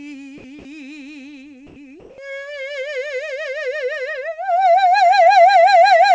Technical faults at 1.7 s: comfort noise in place of the background

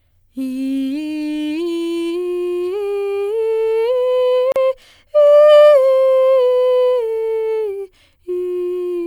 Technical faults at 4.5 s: gap at a join of encoded pieces

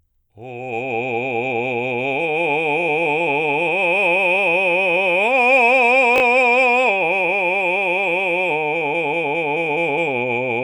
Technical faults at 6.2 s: chunks out of order

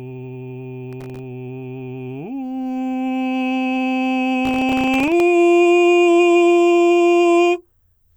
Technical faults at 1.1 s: processor overload crackle

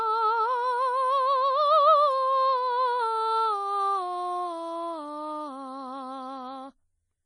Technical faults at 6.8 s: MP3 compression; pre-emphasis left on

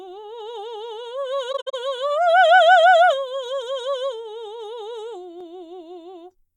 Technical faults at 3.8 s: none

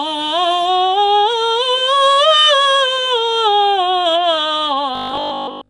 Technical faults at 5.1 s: Nellymoser compression; robotic sound from repeated short buffers

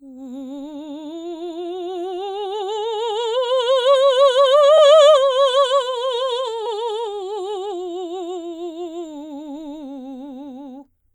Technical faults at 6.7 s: compressed frames skipped

